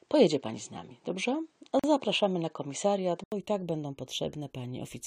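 The input was likely switched to a poorer device, which carries the speech from 0 to 3.32 s. That device passes nothing above 9.2 kHz, so the sound is dull and boxy, with a faint noise floor well below the speech. At 3.32 s an 80 ms silence precedes the return to fuller sound, with a level change of about 5 dB, before "i tak będą".

From 1.79 to 1.84 s there is a gap at a join of encoded pieces. Separately encoded segments were spliced without trimming their start delay and end padding, opening a 42 ms hole with smeared edges in continuous speech, which then resumes where it stopped.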